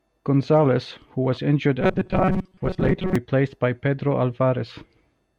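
From 1.81 to 3.16 s the speech goes robotic, a rigid metallic buzz pinned at 188 Hz that only loosely tracks the talking. That's likely robotic sound from repeated short buffers: about half the audio is roughly 5 ms chunks replayed while real audio is skipped.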